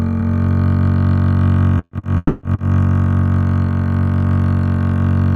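From 1.78 to 2.03 s the music stutters in four short stalls, the longest about 70 ms, as the jitter buffer kept draining and got papered over. Then at 2.17 s there's a call audio freeze: a 240 ms held, fading buzz, likely late packets emptying the buffer, before the music picks up where it stopped at 2.43 s.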